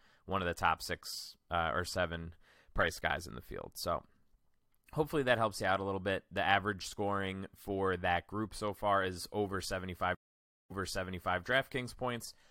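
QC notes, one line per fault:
10.15–11.40 s stream reconnect: after "so far is over" the audio drops to 550 ms of silence, then a fresh decoder resumes 0.7 s earlier, replaying sound.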